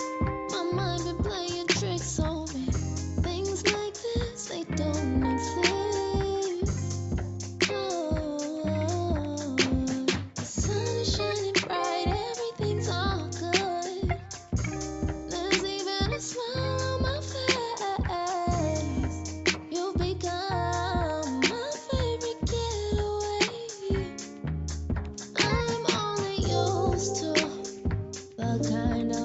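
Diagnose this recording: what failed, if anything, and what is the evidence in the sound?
Nothing failed in this recording; the sound shows only the normal trimming of the lowest bass by call microphone processing, with nothing above 8 kHz.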